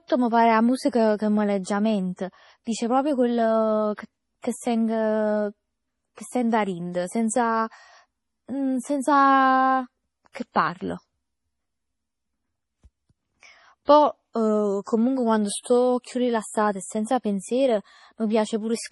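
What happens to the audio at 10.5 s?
From 10.52 to 10.56 s a short hiss rises about 39 ms ahead of a sharp attack. This is pre-echo: the codec spread its quantisation noise across the whole block, so noise meant for the loud onset leaks into the silence before it. Unlike a room echo, it comes before the sound, not after.

Underneath, the audio is watery and swirly with smeared attacks and nothing above 11.5 kHz, pointing to heavy MP3 compression, likely at a low bitrate around 32 kbps. The flickering artefacts set it apart from a simple treble roll-off.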